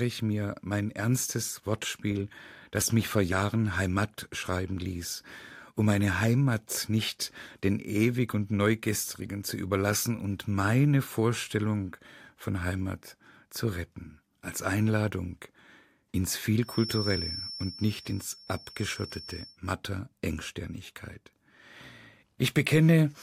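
From 16.59 to 19.59 s, a thin 5.4 kHz feedback whistle sits well below the speech, swelling and fading slowly in level, likely from a loudspeaker-to-microphone loop.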